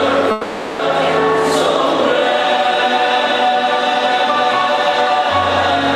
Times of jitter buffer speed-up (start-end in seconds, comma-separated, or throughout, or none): none